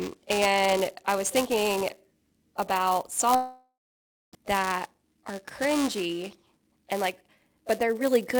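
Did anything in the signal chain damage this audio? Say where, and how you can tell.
Yes. Buffer tearing runs through the whole speech clip at the driver/buffer stage: a robotic buzz at 345 Hz, present only while sound plays, which fits a 128-sample buffer. The writer and reader cross each period, splicing in a small sliver of audio roughly 10 ms old.

A long network dropout runs from 3.35 s to 4.35 s, likely in the network path. The last sound is stretched into a fading buzz, then about 0.62 s of silence follows. Audio resumes at 4.35 s with roughly 0.98 s of material gone.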